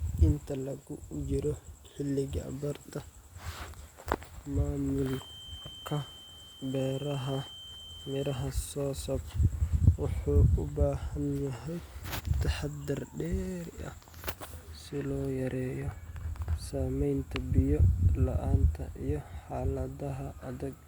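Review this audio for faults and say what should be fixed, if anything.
A feedback whistle runs from 4.97 to 8.53 s. It is a thin, steady tone at 3.1 kHz, sitting well below the speech. Its level swells and fades slowly, but it never builds up. The likely cause is a loudspeaker-to-microphone loop held right at its feedback point. At that point one frequency keeps ringing without running away. To prevent it, lower monitor gain, move the microphone away from the loudspeaker, or notch 3.1 kHz.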